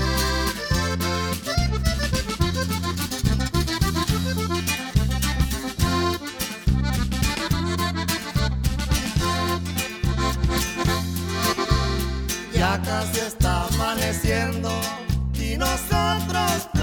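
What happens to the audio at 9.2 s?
Nothing goes wrong at 9.2 s; the audio runs through that moment intact, with no dropout, click or other disturbance.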